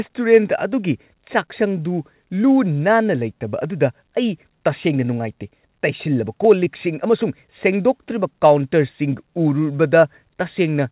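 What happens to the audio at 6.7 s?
A short concealed packet loss occurs at 6.65 s. About 10 ms of audio never reached the decoder in time, so the receiver bridged the gap by extending the preceding speech for roughly 9 ms before blending back, heard as a brief smear or wobble in the 4 kHz-limited call audio.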